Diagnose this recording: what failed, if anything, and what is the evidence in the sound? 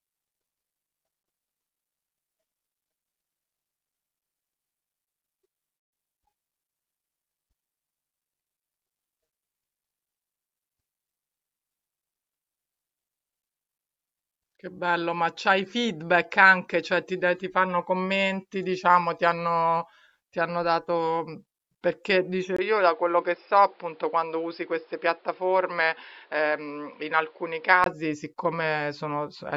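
At 22.57 s there's a 20 ms dropout, then the speech turns boxy with nothing above 5.3 kHz and a new noise floor roughly 35 dB down, at about the same level, until 27.86 s. That's likely the input switched to a poorer device at the driver level.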